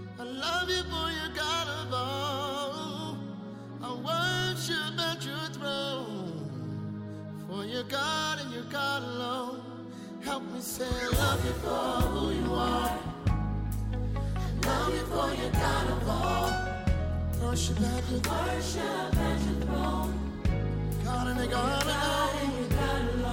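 No technical faults are audible anywhere in the audio.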